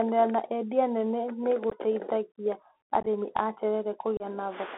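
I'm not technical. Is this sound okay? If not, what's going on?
No. This is speech recorded through a Bluetooth headset, and it has two problems.

The first runs the whole way through. It is the Bluetooth CVSD headset codec, the basic sound format older headsets use for calls. It keeps only a narrow slice of sound, roughly 250 Hz to 3.6 kHz. So the voice sounds thin and phone-like. The format also struggles to follow fast changes in the sound, and that damage is plainly audible. S sounds turn scratchy, and a grainy hiss sits underneath.

The second is unconcealed Bluetooth headset packet loss. The headset sends sound in tiny pieces, and some never arrived. Nothing was filled in, so short holes appear. The first is right after "na endia nene nĩ", from 1.70 to 1.72 s. The second, from 3.00 to 3.07 s, is a cluster of short gaps. The third runs from 4.17 to 4.22 s. The gaps have sharp edges that can click.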